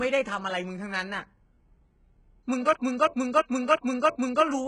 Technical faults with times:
0.00-4.68 HE-AAC compression
2.73-4.44 system hang loop

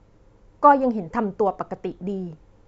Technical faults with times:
none

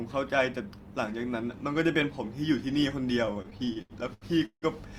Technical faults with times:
3.25-4.65 repeated stalls (stutter)

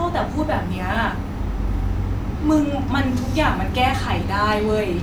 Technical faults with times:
0.95 repeated buffer
2.58 repeated buffer
3.96 repeated buffer

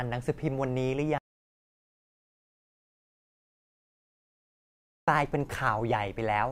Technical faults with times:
1.18-5.08 audio dropout to silence

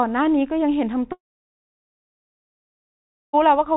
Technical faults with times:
1.12-3.35 long network dropout

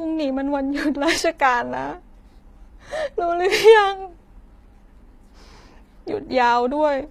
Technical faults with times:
0.00-7.11 HE-AAC compression

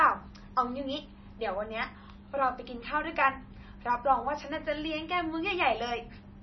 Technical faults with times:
0.00-6.42 MP3 compression

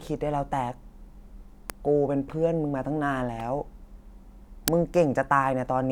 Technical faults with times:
1.70 uninitialised buffer
4.68 uninitialised buffer

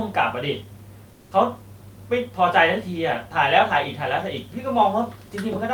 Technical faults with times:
1.13-1.31 comfort noise in place of the background

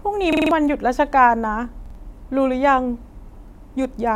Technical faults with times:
0.33-0.51 repeated buffer
1.86-1.95 repeated buffer

